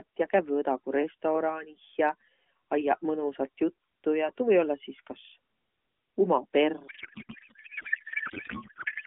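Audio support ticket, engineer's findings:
Codec payload misread from 6.88 s to end: speech turns to garbled warble barely tracking it. Fits octet-aligned AMR frames decoded as bandwidth-efficient, so fields are misplaced; narrowband AMR-NB path before that.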